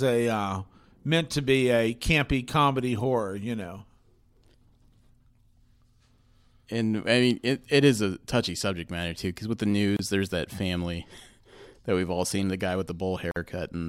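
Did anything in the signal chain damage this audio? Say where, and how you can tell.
Yes, at the codec stage: a gap at a join of encoded pieces. The speech breaks with a 27 ms gap at 9.97 to 9.99 s, after "too because with the", and a 50 ms gap at 13.31 to 13.36 s, after "all seen the guy". Untrimmed encoder delay and last-frame padding remain as dead air.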